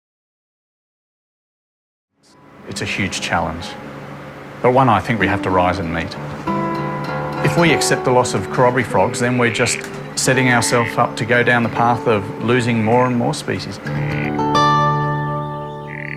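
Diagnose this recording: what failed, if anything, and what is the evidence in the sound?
Nothing in the recording points to a failure at any stage of the chain. The level rises in a smooth fade-in from around 2 s to 3.3 s, an even editorial ramp with no click or hard edge where it begins or ends.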